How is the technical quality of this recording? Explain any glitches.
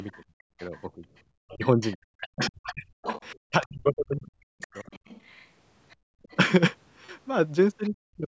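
The recording has echo-control problems: a second, fainter voice keeps surfacing under the talker, the background dips out twice, and the talker's own speech is pushed down in two places.

Other side's voice leaking through appears from 0.07 to 0.81 s, 1.64 to 3.66 s and 4.26 to 6.36 s. A second voice sits behind the talker. It is barely audible at the start, well down near 35 dB below the speech. In the middle stretch it becomes fairly prominent, only around 10 dB down, and later it falls back to roughly 30 dB below. The likely cause is a loudspeaker playing the far end into the microphone, with the echo canceller leaving a residue it failed to subtract.

Background gated by the echo canceller occurs at 0.25 to 0.42 s and 5.96 to 6.23 s. The room sound abruptly sinks by about 30 dB for roughly 150 ms and then roughly 300 ms, and then returns. Both dips fall inside leakage stretches, which fits the canceller clamping the microphone hard while the loudspeaker was active.

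Speech suppressed in double talk runs from 0.7 to 4.75 s and again from 7.88 to 8.3 s. The talker's voice dips, sinking as much as around 40 dB, for about two seconds in total in the first span and most of the brief final span. This is likely the canceller, faced with both sides talking together, treating the near talker as echo and attenuating it along with the loudspeaker signal. The audio throughout stops at 8 kHz, as a call's microphone path leaves it.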